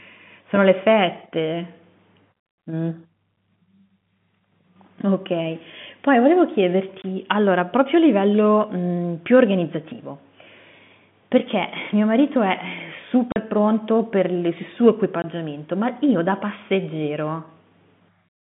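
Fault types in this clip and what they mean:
packet loss filled with silence: Short holes of dead silence with hard edges cut into the speech at 7.02 s and 15.22 s (20 ms) and at 13.32 s (40 ms). Their lengths suggest lost 20 ms packets replaced with silence.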